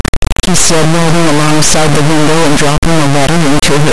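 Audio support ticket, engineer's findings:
Integer read as float, throughout the clip. Speech replaced by extremely loud, harsh buzzing square wave, slamming between silence and the clipping limit, dropping out in the quietest stretches. Likely decode stage: 32-bit integer samples interpreted as 32-bit float, so the raw bit patterns become float values that are near zero, invalid, or far past full scale. Those get clamped to the limit or flushed to nothing, so the waveform no longer tracks the speech.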